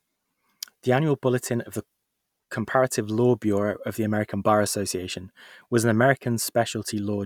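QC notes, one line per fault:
No faults found in this speech recording. Nothing here calls for a QC note.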